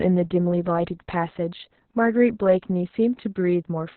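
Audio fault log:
throughout, Opus voice compression: the speech was encoded with Opus at a very low rate, and the heavy damage fits a bitrate around 6 kbps with long 60 ms frames. The encoder has dropped to narrowband, so nothing remains above 4.2 kHz, and its SILK linear-prediction coder has only enough bits for a coarse excitation signal. The speech therefore sounds muffled and boxed-in, with a hoarse, slightly robotic quality.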